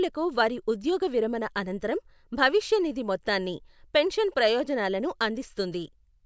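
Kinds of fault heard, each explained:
No faults detected in the speech recording; nothing to list.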